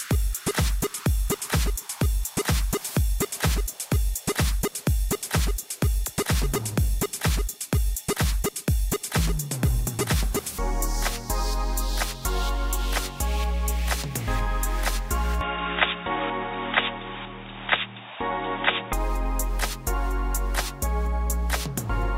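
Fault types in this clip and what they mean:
Input switched to a poorer device: From 15.41 s to 18.93 s the sound turns dull and boxy, with nothing above 3.8 kHz, and a faint new background noise appears about 35 dB below the signal. The change is abrupt, with no gap at the switch and no obvious jump in level, and full brightness returns at 18.93 s. This likely comes from the input moving to a narrower-band microphone or headset call profile and then back.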